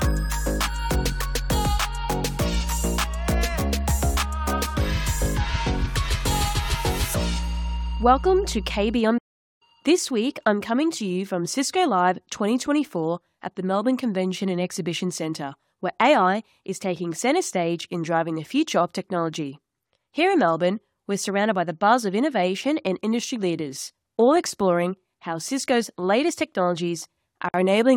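At 9.17 s the sound cuts out mid-flow and stays silent until 9.62 s, a dropout of about 428 ms, before it picks up again. This is a playback stall: the likely cause is that the player ran short of buffered data, or its output thread was held up, so nothing reached the output until it recovered and carried on feeding samples.

Near the end, from 27.49 to 27.54 s, a brief hole of about 53 ms opens in otherwise continuous sound. Its edges are smeared, and the sound resumes exactly where it left off. That is a gap at a join of encoded pieces: two separately encoded segments were butted together without trimming, so the first one's padded final frame and the second one's start-up encoder delay both survive as silence at the seam.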